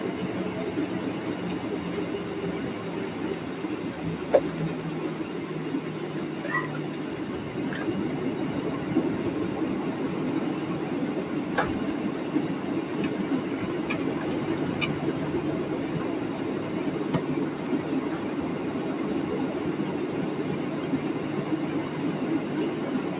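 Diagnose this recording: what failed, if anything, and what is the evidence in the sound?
Nothing seems to have failed here: the audio has just come through a call path, so it stops at 4 kHz, which fits a narrowband G.711-style codec doing its ordinary job.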